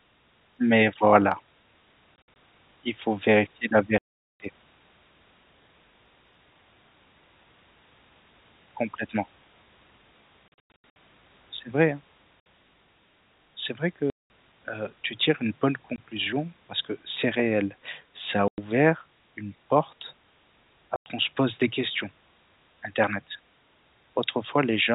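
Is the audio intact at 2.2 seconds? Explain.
No. Packet loss filled with silence hits from 2.16 to 2.36 s, just before "il faut vérifier la": 100 ms of speech drops out in hard-edged gaps, the longest 60 ms, which fits 20 ms packets.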